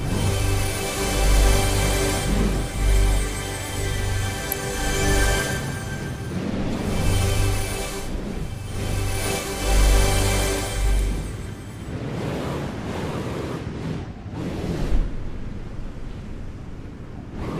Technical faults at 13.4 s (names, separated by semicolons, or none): none